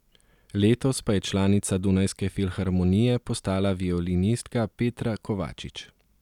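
Listening to this short speech recording, nothing stood out as a technical problem at any point.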